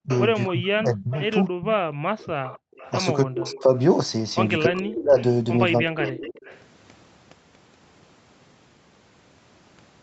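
Speech suppressed in double talk, 0.02 to 1.78 s: the voice dips by up to about 30 dB, in pieces totalling around a second, likely because the echo canceller could not separate its own talker from the loudspeaker echo and turned both down. Echo leak at 0.10 to 0.18 s and 1.15 to 1.22 s: brief scraps of the voice return 265 ms late, about 20 dB down, likely residue the canceller failed to remove. Echo leak again from 2.18 to 3.81 s, now a longer delayed copy 286 ms behind and about 20 dB quieter, likely the same loudspeaker pickup getting through. Background gated by the echo canceller, 2.59 to 2.74 s: the room sound drops by about 40 dB for 150 ms while the loudspeaker plays, then returns. Speech suppressed in double talk, 3.23 to 3.75 s: the voice sinks by about 25 dB for roughly half a second, likely overlap confusing the canceller. Speech suppressed in double talk, 4.66 to 6.41 s: the voice is cut by up to about 25 dB in fragments totalling around a second, likely the same cause. 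It overlaps an echo leak from 4.78 to 6.62 s, where a copy trails 286 ms behind at about 20 dB down.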